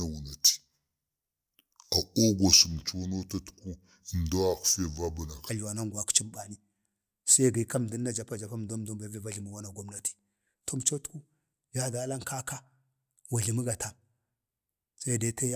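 From the start to about 5.49 s there's a wrong sample rate problem: the speech runs at 0.73 times normal speed and drops about 5.5 semitones, so it sounds slower and deeper. That fits 44.1 kHz audio being played back at 32 kHz without any conversion.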